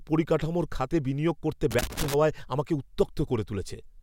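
At 1.71 s the speech is broken by loose connector crackle that lasts until 2.14 s, roughly 0.43 s in total. A worn or dirty contact somewhere in the signal chain is making and losing connection as it shifts, so the signal is chopped on and off in quick, uneven succession. Each break and reconnection leaves a discontinuity, and together they form an irregular burst of scratchy crackle over the speech.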